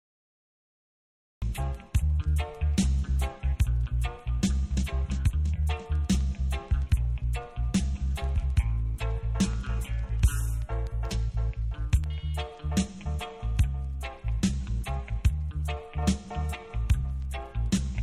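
A cut-off start runs from 0.0 to 1.42 s: the audio holds digital silence, then enters abruptly mid-sound at 1.42 s with no attack or fade-in. Capture or streaming began late, so the opening of that sound was never recorded.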